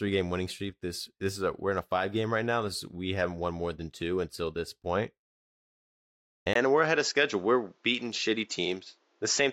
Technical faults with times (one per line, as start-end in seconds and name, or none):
6.53-9.53 input switched to a poorer device